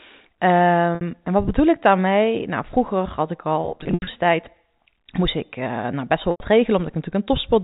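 Packet loss with pitch repetition hits at 0.95 to 1.01 s, 3.61 to 4.07 s, and 6.31 to 6.40 s. The receiver bridges each gap by repeating the last pitch period, so the sound briefly holds with a buzzy edge. The middle stretch scatters losses across 460 ms, with the longest run at 80 ms.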